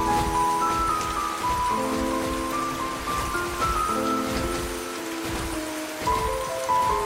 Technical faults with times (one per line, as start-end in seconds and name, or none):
none